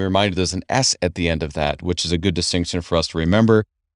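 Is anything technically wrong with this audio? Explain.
No, nothing technically wrong turns up anywhere in this speech recording.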